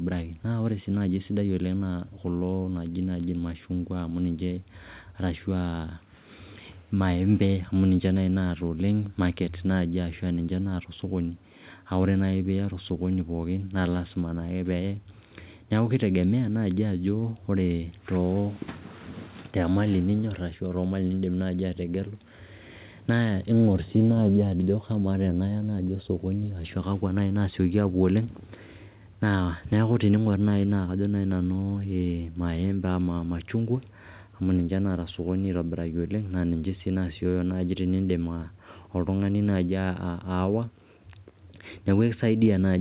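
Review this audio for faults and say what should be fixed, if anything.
Nothing here needs fixing: the speech comes through a normal call path whose narrowband sound, with nothing above 4 kHz, fits G.711 mu-law at 64 kbps, and that's just how that codec sounds.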